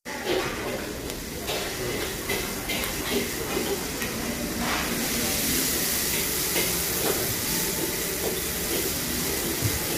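A recording of everyday sounds, degraded across its whole length by plainly audible low-delay AAC compression. It turns rough and grainy, with noise filling gaps between tonal components and a thin, synthetic top band. A spectrogram shows smeared harmonics and patchy upper frequencies. The likely cause is AAC-ELD at a low rate, around 32 kbps.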